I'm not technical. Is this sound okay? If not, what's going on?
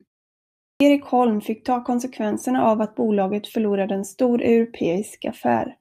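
No. The playback device seems to doze off during the silence at the very start, and it needs a moment to wake up once sound arrives. That's a clipped start after a pause. After about 0.76 seconds of quiet, the first roughly 45 thousandths of a second of speech are swallowed, up to about 0.80 seconds. So the opening word jumps in abruptly, missing its first sound.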